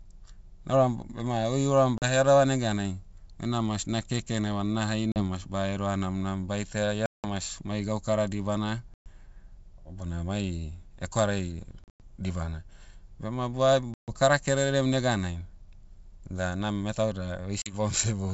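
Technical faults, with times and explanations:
1.98–2.05, 5.12–5.21, 7.06–7.27, 8.94–9.09, 11.84–12.01, 13.94–14.13 and 17.62–17.74 s, packet loss on an ADPCM call: dropouts of 40 to 180 ms, the 11.84 s one broken into scattered gaps, are filled with abrupt silence. Afterwards the G.722 decoder's predictor and step size have drifted from the sender's, so audio returns slightly distorted until they resync.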